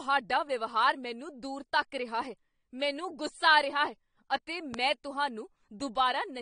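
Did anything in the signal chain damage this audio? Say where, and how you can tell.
Yes. The speech has nothing above 9.7 kHz, with plainly audible codec damage. Likely cause: AAC compression at the codec stage, where a bitrate near 32 kbps lowers the cut-off.

One loud pop, about 10 dB over the speech, lands at 4.74 to 4.76 s, just after "ਆ ਰਿਹਾ ਹੈ ਅਤੇ". It is likely a voltage pulse in the wiring or driver.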